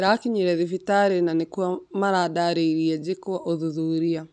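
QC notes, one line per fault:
No faults detected.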